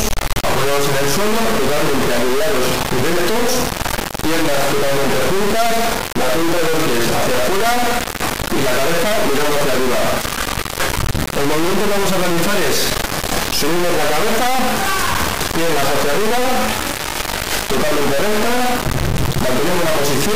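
From start to finish the audio is replaced by an extremely loud, harsh buzz, a square-wave-like signal slamming between silence and full clipping, falling to silence only where the material is very quiet. This is integer read as float: the sound points to 32-bit integer samples being interpreted as 32-bit floating-point values. That reinterpretation yields numbers that are either near zero or wildly beyond full scale, so the output snaps between nothing and the clip limit.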